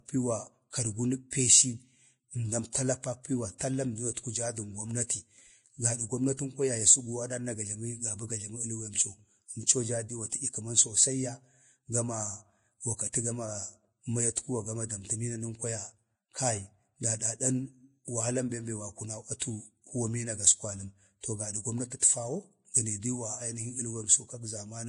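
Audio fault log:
throughout: Vorbis compression, likely at a bitrate near 30 kbps, leaves hissy, grainy treble; the spectrogram shows nothing above 10.6 kHz and coarse, noisy high bands.
1.30–1.32 s and 19.39–19.42 s: pre-echo, a 20 to 24 ms smear of hiss before sharp attacks, visible as noise leading each transient in the waveform.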